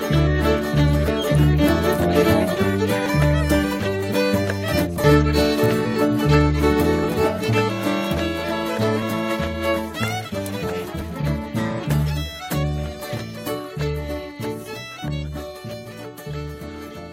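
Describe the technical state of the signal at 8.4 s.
At 8.4 s the signal is intact, with no dropout, clipping, distortion or other fault audible.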